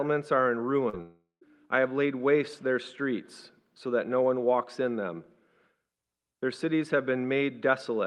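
A short run of call audio, carried over an Opus-coded path whose sound stops at about 12 kHz, is hit by two faults in quick succession. First comes short concealed packet loss at 0.89 to 0.95 s: about 40 ms of data failed to reach the decoder in time, so the receiver extended the preceding sound to cover the gap and then crossfaded back to the real signal. What you hear is a brief smear or wobble rather than a clean cut. The second fault follows almost immediately. From 1.01 to 1.43 s the sound again turns into a synthetic continuation of what came before, a buzzy or hissy tail that fades away and leaves roughly 150 ms of near-silence before normal audio returns. That stretch of about 400 ms never comes back. This is likely a long network dropout, in which the receiver had nothing to play and could only extrapolate briefly before giving up.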